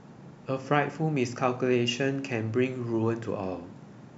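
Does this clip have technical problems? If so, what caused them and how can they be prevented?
Yes. Faint, regular ticks run through the speech from 0.23 s to 3.89 s, about one every half second, roughly seven in all. These are clock slip clicks. Each tick is a single sample dropped or repeated. The likely cause is two devices running on separate, unsynchronised clocks. Their mismatch, around 40 parts per million, builds up to a whole sample about twice a second, and each slip leaves a small step in the waveform. Prevent it by locking every device to one shared word clock, or by using an adaptive sample-rate converter between them.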